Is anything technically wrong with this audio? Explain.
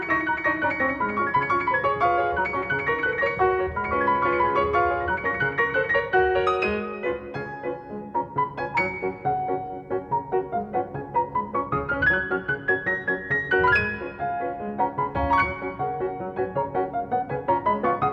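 No, nothing technically wrong stood out on listening to this audio.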